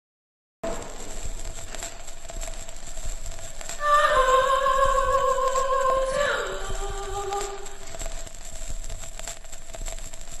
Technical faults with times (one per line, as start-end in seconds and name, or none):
0.00-0.64 cut-off start